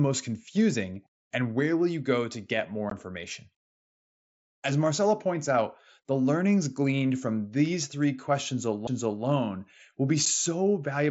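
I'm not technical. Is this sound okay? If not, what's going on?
No. There are two kinds of fault in this speech.

The first is unconcealed Bluetooth headset packet loss, at 2.90 s and again at 10.26 s. A headset sends sound to the phone in tiny packets. A few of them went missing, and nothing filled the gaps. You hear very short holes with sharp edges, which can click. The first hole lasts about 15 ms, which points to two lost packets. The second lasts about 7.5 ms, likely a single lost packet.

The second is a CD skip at 8.87 s. A bump or a flaw on the disc made the laser jump to another turn of the spiral track. The player goes silent for a split second. Then the speech carries on from a different place. It doesn't resume where it stopped.

The link runs through the mSBC headset codec. It carries speech up to 8 kHz and adds a faint graininess on louder sounds.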